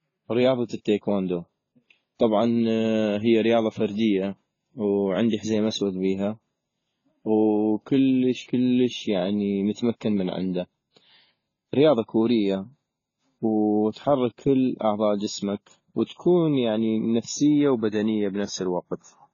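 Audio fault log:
Throughout: transcoding between lossy codecs. The speech carries two layers of coding damage at once: a smeared, swirling graininess from a very starved first encode, with a second codec's own fine grit laid over it. This is likely a low-rate AAC stream later re-encoded to WMA at a moderate rate. The second pass spends its bits preserving the earlier artefacts rather than removing them. On a spectrogram all energy stops at a hard ceiling near 7 kHz, with patchy, blocky texture below it.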